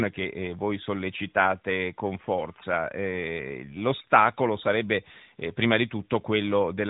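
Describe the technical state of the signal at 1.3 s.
At 1.3 s the signal is intact, with no fault present; the only thing audible there is the expected narrowband character of the AMR narrowband mobile codec path, which passes nothing above 3.8 kHz.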